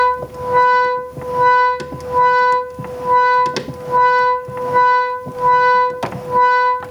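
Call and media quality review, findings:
Gain pumping, throughout. Swing around 10 dB. Likely cause: input gain set far too high, with a fast limiter or compressor clamping every peak. Loud and soft parts pushed close in level, sound squashed. Unlike a noise gate, pumping lifts rather than cuts the level in gaps, and it tracks each loud event rather than drifting slowly.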